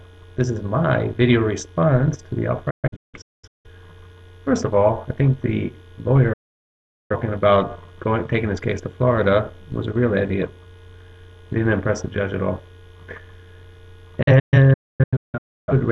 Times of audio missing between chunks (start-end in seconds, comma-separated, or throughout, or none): none